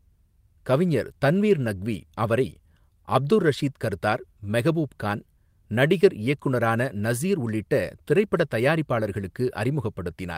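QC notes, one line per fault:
Nothing to flag on this speech clip; no technical faults turn up anywhere in it.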